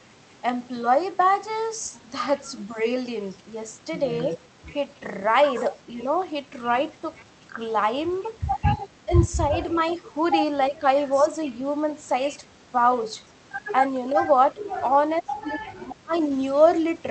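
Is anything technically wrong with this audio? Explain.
Yes, there are two kinds of fault.

Speech suppressed in double talk at 5.89–6.02 s, 9.05–11.26 s and 14.11–16.3 s: the level sags by up to about 5, 15 and 25 dB respectively. This is likely an echo canceller ducking both talkers, and it sounds like pumping gain rather than clean packet-loss gaps.

Echo leak at 9.87–9.97 s and 16.15–16.7 s: a faint copy of the voice trails 341 ms behind, about 30 dB down. This is likely uncancelled loudspeaker pickup, and the distinct delay sets it apart from smeared room reverb.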